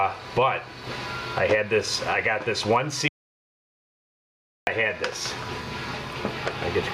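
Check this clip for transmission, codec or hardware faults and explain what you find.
Two faults stand out: gain pumping across the whole clip and a dropout to silence in the middle.

Gain pumping runs from start to finish, with the level swinging by around 15 dB. That likely comes from input gain set far too high and a fast limiter clamping down, which leaves everything squashed.

The audio dropout to silence hits at 3.08 s and lasts until 4.67 s, about 1.6 s gone. The sound cuts off mid-flow into silence with no room tone at all, which points to the input likely being lost while the recorder kept writing silence.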